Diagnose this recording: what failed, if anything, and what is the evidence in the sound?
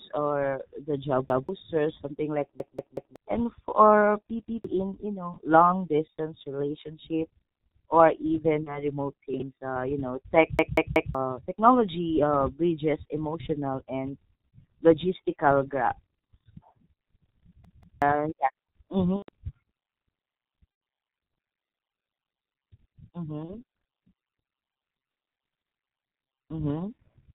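At the codec stage, the whole speech clip passed through G.723.1 at 6.3 kbit/s with heavy damage. It works in 30 ms frames with a slowly updated voice model and passes nothing above 4 kHz, so the sound is muffled and hoarse throughout and consonants smear together.

A repeated buffer fault occurred at the driver or buffer stage: playback starved and the last block was replayed. A 186 ms piece repeats with hard joins at 1.30 s (once), 2.60 s (three times), 4.46 s (once), 10.59 s (three times) and 17.65 s (twice). This fits an 8192-sample buffer and displaces roughly a fifth to half a second of audio each time.

Chunks out of order, most likely from the buffer or storage path writing late: 20 ms chunks play after their successors. At 5.34 s one chunk arrives one position late, and at 9.34 s one arrives three positions late. Each gives a brief jumbled moment.

On the network side, VoIP packet loss concealed by the speech codec: lost frames were extrapolated from the last pitch and filter, fading as they went. 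Stretched, fading sound appears at 8.63 s and 23.45 s (30 ms lost each), 19.17 s (120 ms) and 20.72 s (90 ms). The sound stays weak for a moment afterward.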